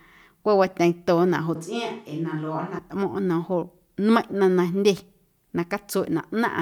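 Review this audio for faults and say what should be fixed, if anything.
From 1.56 to 2.78 s the speech suddenly turns hollow, thin and about 5 dB quieter. That's likely a switch to a distant microphone. Monitor the close mic's feed so any dropout gets caught.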